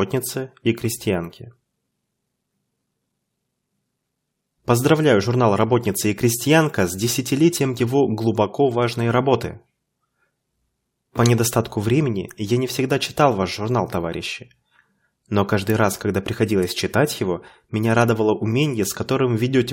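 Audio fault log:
No audible faults detected.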